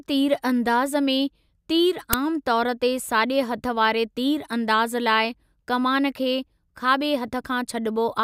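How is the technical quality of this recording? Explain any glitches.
The speech recording has one clear glitch. Uninitialised buffer at 2.13 s: an audio block was sent to playback before any samples had been written to it, so whatever stale data sat in that memory was played as sound. The result is a very short, loud crack, about 5 ms long, which fits a 256-sample buffer.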